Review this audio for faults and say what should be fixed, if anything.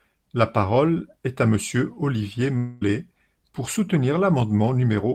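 At 2.57 to 2.83 s the speech turns into a fading buzz, then resumes with about 0.24 s lost. This is likely a long network dropout, too long and too decayed for a single-packet glitch. A more stable network link, with a larger jitter buffer and redundant or retransmitted packets, would prevent it.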